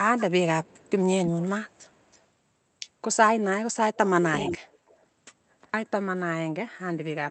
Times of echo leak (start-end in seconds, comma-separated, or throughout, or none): 0.18-0.24, 0.64-0.91, 1.25-1.29, 1.78-2.21, 4.33-4.95